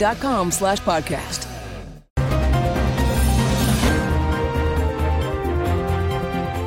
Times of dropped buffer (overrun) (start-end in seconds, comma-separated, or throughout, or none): 0.78, 3.14